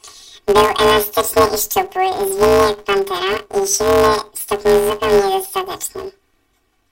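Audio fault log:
Throughout: planar audio read as interleaved. Each 5.33 ms block, consistent with a 256-sample planar layout, plays its left channel then its right at double speed. The speech gets a robotic 188 Hz buzz without an octave shift. Spectrograms show bands spaced 188 Hz apart, and the waveform shows short repeating segments.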